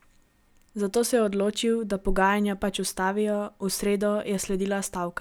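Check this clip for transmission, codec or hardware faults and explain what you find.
Nothing in this speech recording points to trouble in the transmission, the encoding or the hardware, so there's no fault to report.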